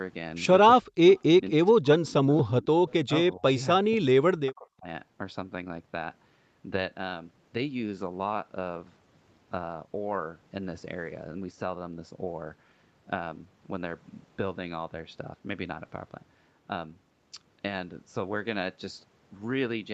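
From 0.77 to 1.0 s the speech drops sharply, by roughly 40 dB. This is speech suppressed in double talk: the echo canceller likely mistook simultaneous far-end talk for echo and attenuated both. The same dips recur at 1.55–2.64, 3.05–3.12, 3.36–3.59 and 3.76–4.86 s, ranging from about 25 to 40 dB.

At 1.08–1.19 s and again at 2.88–2.94 s, a faint scrap of the voice returns about 241 ms late, roughly 30 dB below the speech. This echo leak is likely residual loudspeaker pickup that the far-end canceller failed to remove.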